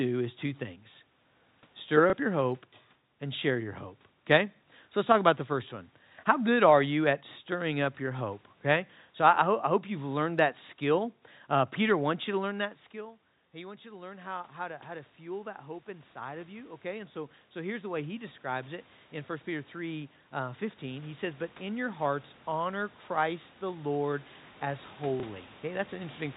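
At 2.1 s, about 30 ms of audio goes missing, which fits a single lost 30 ms packet, and the receiver fills the gap by replaying the previous packet. This is packet loss with the last packet repeated. It comes out as a small blip.

From 12.44 s, around when the talker moves away from the microphone at about 12.5 s and the input falls by about 19 dB, the automatic gain rises by about 18 dB over the remaining 14 s. Voice and room noise swell back up together, gradually rather than in a step.

At 25.2 s the same kind of 30 ms packet loss recurs. The last packet is repeated, producing another small blip.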